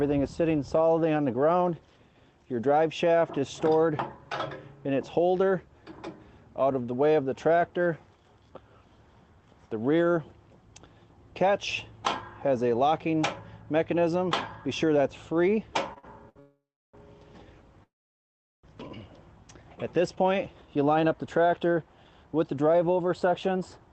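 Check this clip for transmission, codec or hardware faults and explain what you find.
Yes, there are transmission faults: delayed packets emptied the jitter buffer several times, and the receiver later ran the audio fast to recover the added delay. The path itself sounds band-limited to about 8 kHz, as a call codec such as Opus would produce.

Short stalls from late packets occur at 15.93 to 15.98 s, 15.98 to 16.05 s and 16.29 to 16.38 s. Each time a packet missed its playout slot, so the receiver stretched the last sound for 29, 50 and 63 ms. The sound hangs briefly with a faint buzz or dip, but nothing is skipped.

Call audio freezes occur at 16.40 to 16.95 s and 17.83 to 18.65 s, likely from packets held up in transit that drained the jitter buffer. The last sound is extended, then fades to silence for about 350 ms and 750 ms. Playback resumes exactly where it stopped, inserting gaps of 538 ms and 800 ms.

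A jitter buffer speed-up runs from 20.17 s to 23.88 s. The buffer had built up excess delay after the stalls, so the receiver repeatedly trimmed pitch-period-sized pieces, removing roughly 0.4 s. The audio plays at about 111% speed with unchanged pitch, sounding rushed.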